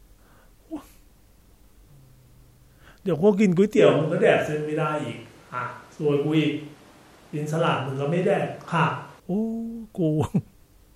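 From 3.79 s to 9.20 s the speech turns suddenly roomy and hollow, with thinner bass and background noise roughly 30 dB under it, then snaps back. This is likely a switch to a distant microphone; unlike added reverb, both changeovers are abrupt, while the level stays about the same.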